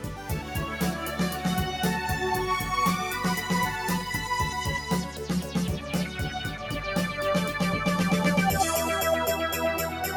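The audio runs through a speech-style noise suppressor left active on non-speech material, and the damage is audible throughout. Sustained and decaying parts of the sound are treated as noise and pushed down while onsets pass, so the level swings by around 5 dB and the texture pumps and thins. On a waveform the envelope shows uneven dips after each attack. A spectrogram shows held components and tails fading early, with patchy gaps where ambience should sit.

Two stretches show sound cut by the noise suppressor more heavily than elsewhere. From 0.0 to 0.53 s the opening dips by up to about 6 dB across most of that span, and from 5.05 to 5.25 s there is a shorter drop of about 5 dB. The suppressor misclassified that material as noise, so it sinks instead of holding steady. These show as hollowed-out notches in the waveform envelope and as darkened, thinned bands on the spectrogram.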